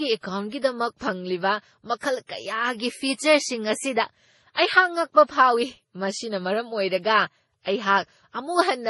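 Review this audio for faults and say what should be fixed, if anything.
Throughout the speech the top end stops sharply, with nothing above 11.5 kHz, and two different kinds of coding damage are heard stacked together. This is likely transcoding between lossy codecs: the artefacts fit a low-bitrate MP3 stage around 32 kbit/s followed by Vorbis at a similar rate, with the second codec wasting bits re-encoding the first one's errors while keeping its cut-off. To prevent it, encode once from the original uncompressed source rather than converting one lossy file into another.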